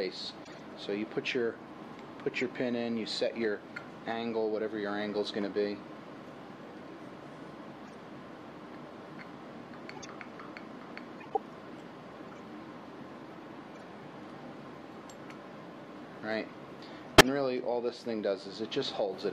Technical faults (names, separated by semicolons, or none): corrupt frame decoded